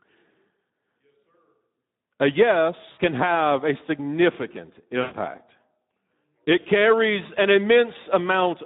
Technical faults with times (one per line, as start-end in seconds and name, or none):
0.00-8.65 Speex codec
2.91-2.99 VoIP packet loss concealed by the speech codec
5.01-5.15 VoIP packet loss concealed by the speech codec